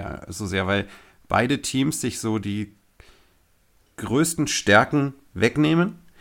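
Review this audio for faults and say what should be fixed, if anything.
No faults heard in the speech; nothing needs fixing.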